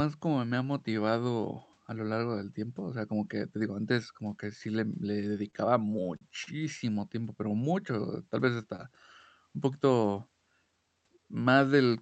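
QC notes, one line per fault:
5.37–6.23 s, repeated stalls (stutter): Right after "que sí le le" the speech catches five times. Packets arrived late, and the jitter buffer ran dry each time. The receiver bridged each wait by continuing the last sound. About 97 ms is filled in this way, roughly a tenth of the span. The longest gap is 40 ms. Nothing is lost, but the speech hitches and drags in small jerks.
6.94–8.63 s, jitter buffer slow-down: The speech runs at about 93% speed here while the pitch stays put. The buffer was short of reserve, so the receiver repeated single pitch periods and bits of pauses over and over. That adds 131 ms in total. Sounds are drawn out, and the delivery feels slightly sluggish and stretched.
10.58–11.25 s, jitter buffer speed-up: After "un poquito" the speech hurries to about 115% speed, again at unchanged pitch. The buffer held more audio than its target, so the receiver cut out short pieces of one or a few pitch periods in succession. 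Roughly a tenth of a second is trimmed away. The phrase sounds rushed and clipped.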